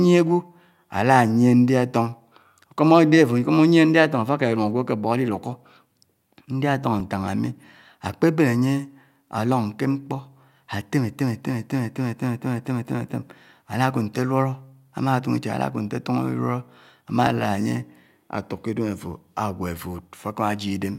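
At 7.00 s and 17.27 s the speech jumps ahead by a few milliseconds. It's likely a dropped buffer (overrun): unread samples were overwritten, so the audio splices straight across.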